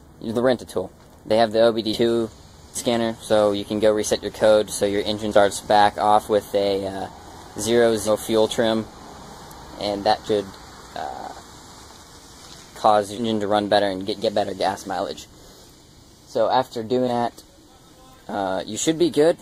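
Jumps, each with the sound lurching forward, occur at 1.93, 5.31, 8.07, 10.27, 13.17 and 17.07 s. The gaps in content are small at the first two, somewhat larger at 10.27 and 17.07 s, and largest, around a third of a second, at 8.07 and 13.17 s. These are compressed frames skipped: whole blocks of coded audio never reach playback, so it resumes later, by steps that fit 20 ms frames.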